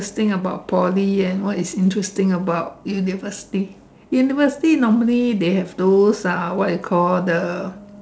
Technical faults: none

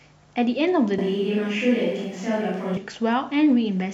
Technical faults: switch to a distant microphone

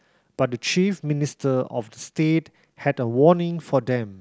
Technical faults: none

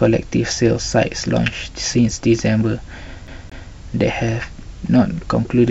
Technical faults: CD stuck on one turn

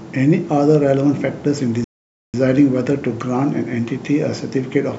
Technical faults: Bluetooth stall

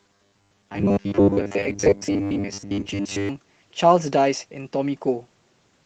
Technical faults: robotic sound from repeated short buffers

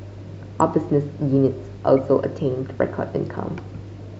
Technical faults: corrupt frame decoded

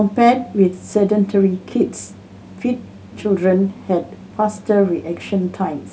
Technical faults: none

